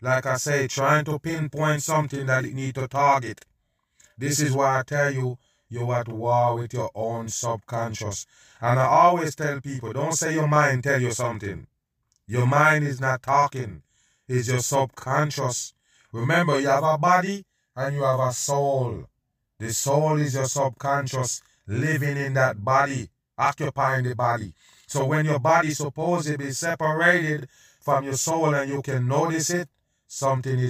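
Throughout the speech, channel delay (doubling) puts a same-level copy 40 ms late, heard as a distinct slap rather than the smeared tail of room reverb.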